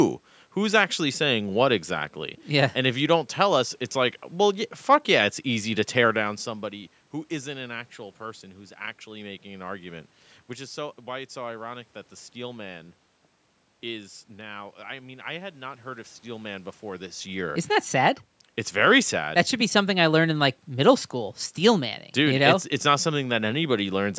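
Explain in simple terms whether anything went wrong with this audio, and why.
Nothing went wrong here.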